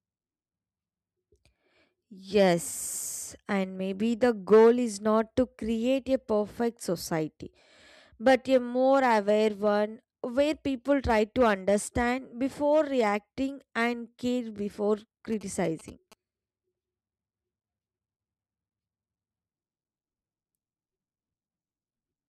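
At 15.32 s you get GSM signalling bursts lasting to 16.14 s, so a bit under a second. A 2G phone close by is sending short groups of radio bursts while signalling, and the audio circuit rectifies them. It comes through as a galloping dit-dit-dit of brief buzzes pulsing at about 217 Hz. It sits well under the speech, somewhere around 25 dB down.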